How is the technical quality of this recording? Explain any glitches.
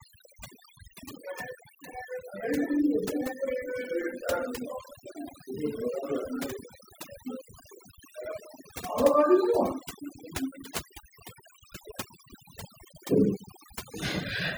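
The recording has one problem, and it runs for the whole clip. Overdone noise removal affects the speech from start to finish. A noise reduction tool was pushed too hard. It shuts down frequency bands that sit near its noise estimate, taking quiet parts of the voice with them. The background drops and breaks up into twinkling specks.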